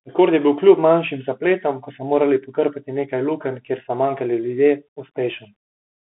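Bluetooth CVSD headset codec damage runs through the whole speech clip: the band sits at roughly 200 Hz to 3.5 kHz with nothing above 3.8 kHz, and the plainly audible granular hiss and scratchy sibilants fit a 64 kbps one-bit delta coder whose adaptive step can't keep up with loud high content.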